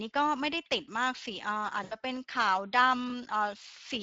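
Speex codec coding runs through the whole speech recording. The CELP encoder models the sound with too few bits to rebuild its excitation faithfully. This gives a plainly audible hoarse, grainy roughness, which fits a bitrate around 20 kbps.

VoIP packet loss concealed by the speech codec occurs from 1.83 to 1.95 s. About 80 ms of audio went missing, which fits four lost 20 ms frames. The decoder stretched its last pitch and filter forward at falling gain, so the speech smears into a fading buzzy tone or coloured noise, and the speech stays weakened briefly after packets return.

Chunks out of order appear from 3.08 to 3.12 s. A 20 ms chunk arrived one chunk late and played after the chunk that should follow it. No audio is lost, but the wrong order creates hard joins, heard as a short jumbled moment.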